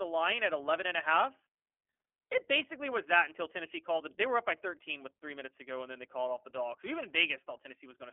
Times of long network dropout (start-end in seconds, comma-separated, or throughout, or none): none